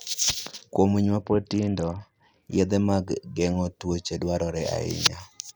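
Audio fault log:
1.22–2.42 s, Bluetooth SBC bit pool drop: after "winy ma" the treble dulls and gritty noise rises, as if the bit pool fell from 31 to 7 (near 61 kbps). The spectrogram loses its top bands until "yedhe mag geng'o kute".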